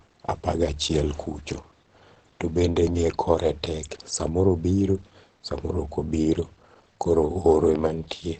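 From start to finish the speech sounds muffled and hoarse, with a hard ceiling at about 8.6 kHz and nothing at all above it. The damage is plainly audible and sits over the whole clip. That's most likely Opus compression running in its speech-oriented SILK mode at a wideband setting. The encoder throws away the top octave and models the voice coarsely, which fits a low rate around 16 kbps.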